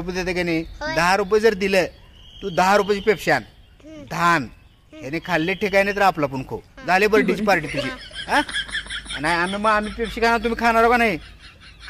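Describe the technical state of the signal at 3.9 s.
At 3.9 s the signal is intact, with no audible fault at that point.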